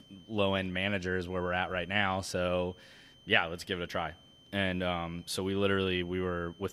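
A switching supply whistle runs under the speech for the whole clip. It is a thin, high tone near 3 kHz, wandering slightly between about 3.08 and 3.13 kHz. It sits roughly 30 dB below the speech, so it stays faint but steady in pauses. A switching power supply is ticking over at an audible rate, and that whine is leaking into the recording path.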